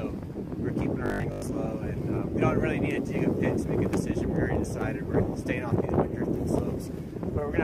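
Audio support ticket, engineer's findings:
Robotic sound from repeated short buffers, 1.06–1.42 s: rigid 50 Hz buzz across most of span. Likely late audio delivery, last 20 ms looped while incoming audio skipped.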